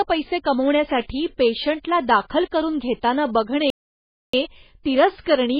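A speech recording runs throughout with MP3 compression damage: the treble is cut off at a fixed frequency, and the remaining sound has a watery, swirling quality as weak frequency components flicker in and out between frames. That combination is most likely from an encoder starved of bits, and the heaviness fits a very low rate around 16 kbps. The swirl is what separates it from a simple low-pass filter, which would dull the top end but leave the rest steady. Separately, a playback stall silences the output from 3.70 s to 4.33 s, a gap of about 0.63 s, likely because the player ran out of data or was blocked. Its length marks it as a stall rather than a packet-loss dropout, which would cut only tens of milliseconds and often be concealed rather than left as clean silence.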